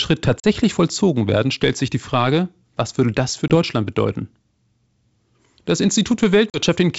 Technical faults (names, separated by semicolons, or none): packet loss on an ADPCM call